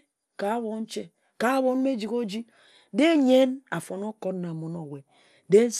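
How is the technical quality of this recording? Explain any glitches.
Technical quality is poor throughout. The speech sounds dull with a gurgling, granular distortion, likely MP2 compression at a low bitrate around 80 kbps: starved sub-bands switch off, leaving flickering, ragged upper-frequency bands on a spectrogram.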